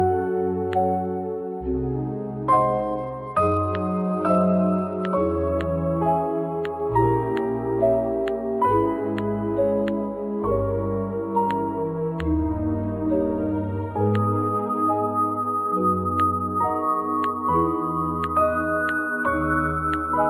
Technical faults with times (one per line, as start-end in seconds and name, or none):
1.62-5.49 Bluetooth SBC bit pool drop